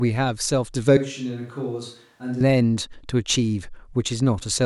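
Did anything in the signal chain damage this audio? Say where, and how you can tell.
Yes. At 0.97 s the speech abruptly turns hollow and roomy, about 10 dB quieter and thinner in the bass, until 2.40 s. This is likely a switch to a distant microphone at capture. The waveform envelope steps down sharply at the start and back up at the end, and the spectrogram shows weakened lows and reverberant smear between syllables.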